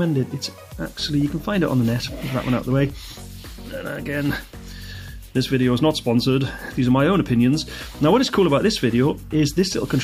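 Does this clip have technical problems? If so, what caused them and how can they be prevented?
No, this clip has no technical problems, so there is nothing to prevent.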